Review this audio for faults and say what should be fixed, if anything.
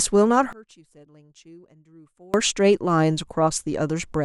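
One channel inverted, 0.53 to 2.34 s: the speech drops by about 29 dB in mono, likely because one channel's polarity flipped, cancelling the shared centre signal. Prevent it by checking channel polarity and mono compatibility before export.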